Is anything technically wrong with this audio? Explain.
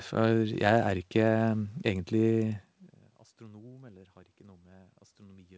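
No, nothing technically wrong can be heard here.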